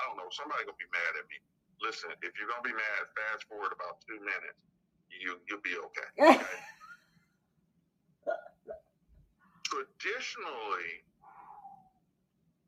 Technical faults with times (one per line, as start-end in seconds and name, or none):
0.00-12.67 noise suppressor applied to music or sounds
1.39-1.80 sound cut by the noise suppressor
3.76-5.93 channel delay (comb filtering)
4.53-5.12 sound cut by the noise suppressor
6.73-9.64 sound cut by the noise suppressor
11.01-11.25 sound cut by the noise suppressor
11.76-12.67 sound cut by the noise suppressor